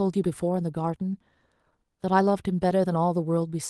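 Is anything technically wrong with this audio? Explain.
Yes, there's a timing problem running through this speech clip.

Clock drift between sender and receiver is present throughout: the sending side's clock seems to run fast, by something like 5 percent. That means more audio arrives than the receiver plays out in real time, so its jitter buffer keeps filling, and it has to keep trimming material to stay in step.

Repeated timing corrections run from about 0.23 s to 3.44 s. The receiver keeps cutting short pieces, all in the same direction, at uneven intervals, so playback effectively runs at about 105% speed. If they are noticeable at all, they come across as small hiccups and a slightly rushed, unsteady pace, heard through the band-limited sound of the call codec, which tops out around 12 kHz.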